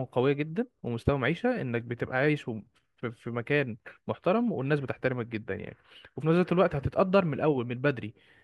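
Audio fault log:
No faults are heard anywhere in this speech clip. Nothing in it calls for a timed entry.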